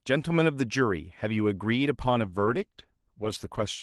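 From 2.28 s to 3.74 s the speech goes through a call bitrate drop. The encoder had to squeeze the audio into far fewer bits, and the degradation fits a fall from around 32 kbps to about 13 kbps, held at its lowest for roughly 1.4 s. The speech turns coarse and watery, and the top end is cut back below the call path's normal 12 kHz limit. Unlike packet loss, nothing drops out or repeats. The sound stays continuous and simply loses detail across the whole stretch.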